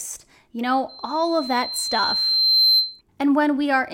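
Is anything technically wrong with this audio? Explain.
Yes. From 0.89 to 3.01 s there is loudspeaker feedback squeal: the microphone picks up its own loudspeaker, and at 4.1 kHz the loop gain exceeds one. That tone swells over about a second and a half into a piercing whistle several decibels above the speech.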